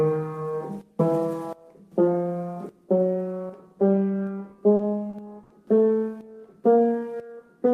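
At 4.75 to 4.81 s, 5.09 to 5.15 s and 5.43 to 5.52 s come three short stalls from a late packet. Each time the jitter buffer ran dry, so the last sound was held for 40, 40 and then 70 ms before playback resumed where it left off. Nothing is skipped. What sets these apart is the sudden, isolated freeze.

From 6.61 to 7.34 s a jitter buffer slow-down sets in. The receiver built up reserve by repeating tiny slices of the signal many times, adding 87 ms and running at 89% speed. Unlike the stalls, the stretching is spread smoothly across the passage at unchanged pitch.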